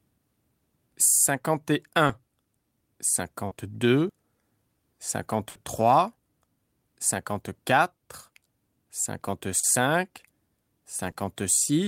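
Short concealed packet loss at 2.07 to 2.11 s and 3.47 to 3.53 s: 20 ms and then 40 ms of the call arrived too late for the decoder, and the receiver filled each hole by extending the preceding sound before blending back, leaving a brief smear or wobble in the speech.

A burst of packet loss runs from 5.49 to 5.57 s. About 60 ms went missing in a row, so the receiver kept stretching the last sound and fading it, a held buzz or dying hiss, before the speech picks up again with that stretch gone.

The same short concealed packet loss returns at 9.59 to 9.65 s, with 40 ms patched over, and at 11.11 to 11.15 s, with 20 ms patched over. Both are audible as quick wobbles where invented audio covers the gap.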